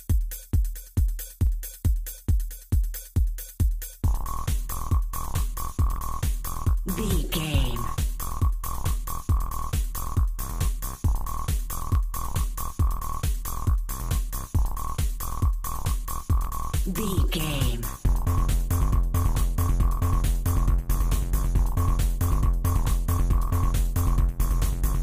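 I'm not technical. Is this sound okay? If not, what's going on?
No. A click repeats every 1.5 seconds from 1.47 s to 23.94 s, likely clock drift buffer slips: two devices' clocks disagree slightly, so tiny chunks of sound get dropped or repeated.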